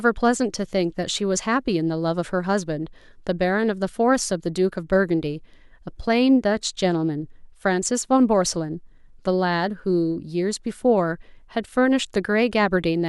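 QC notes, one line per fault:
No faults heard in this speech recording; nothing to log.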